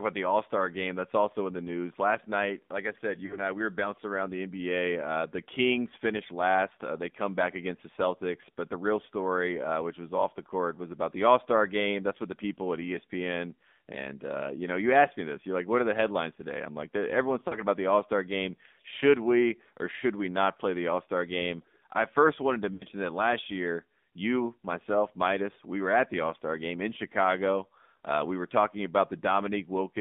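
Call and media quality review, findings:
Buzzy, synthetic speech band-limited to 200 Hz–3.6 kHz throughout: AMR narrowband mobile codec (AMR-NB) at a low rate, which fits 7.4 kbps; the sparse-pulse vocal-tract model audibly strains.

Brief dropouts at 3.26–3.39 s (after "night like I said"), 17.48–17.59 s (after "today I'm like everyone's") and 22.74–22.84 s (after "I first wanted to"): lost AMR speech frames. The decoder stretches the last good frame with fading gain, which fits two, two and three lost 20 ms frames.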